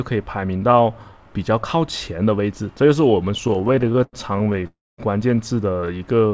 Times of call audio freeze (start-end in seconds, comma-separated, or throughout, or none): 4.67-5.00